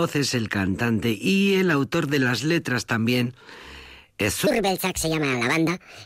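From 4.47 s to the end of the clip, the speech shows a wrong sample rate fault. The audio runs 1.5 times too fast, and pitch rises by about 7 semitones with it, so the voice turns high and hurried. The ratio fits samples recorded at 32 kHz being played at 48 kHz with no conversion. On a spectrogram, harmonics and formants jump upward by that factor and syllables are squeezed in time. The waveform shows shorter, denser bursts.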